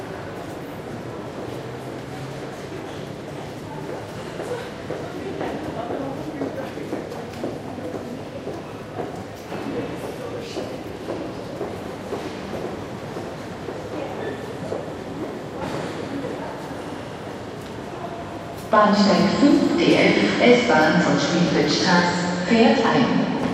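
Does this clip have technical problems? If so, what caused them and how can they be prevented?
No, nothing in this recording of sounds points to a technical problem, so there is no cause to trace and nothing to prevent.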